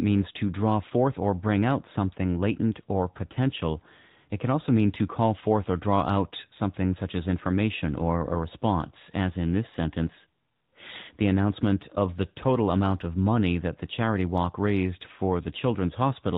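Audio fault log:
throughout: AMR narrowband mobile codec. The speech is cut off above 4 kHz, the ceiling set by 8 kHz sampling, and has a plainly audible buzzy, somewhat synthetic edge, which fits a mid-rate AMR-NB mode near 10.2 kbps. The codec rebuilds the voice from a vocal-tract model driven by sparse pulses every 5 ms. So, unlike a simple low-pass filter, which only dulls the sound, this voice sounds resynthesised.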